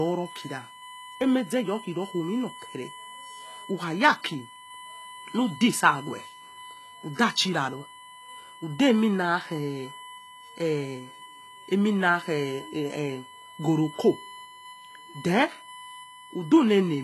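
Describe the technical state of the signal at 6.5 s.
At 6.5 s, as throughout the clip, a USB whine sits at a fixed 1 kHz, roughly 20 dB below the speech. Its pitch follows the bus's 1 ms frames, unlike mains hum at 50 or 60 Hz. The speech also carries plainly audible damage, likely from HE-AAC compression at a low bitrate near 16 kbps. Nothing remains above 12.3 kHz, and the rebuilt treble sounds gritty and metallic rather than simply dull, as a plain low-pass would.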